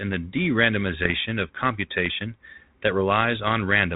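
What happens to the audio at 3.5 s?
Bit errors on an ADPCM link strike from 3.43 to 3.49 s, just after "of computation that": a small fraction of flipped bits throws the decoder's step size and predictor off track, so each error rings on briefly as pops and a rough burst with jumpy level.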